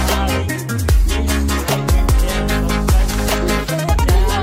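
No technical fault can be heard anywhere in the audio.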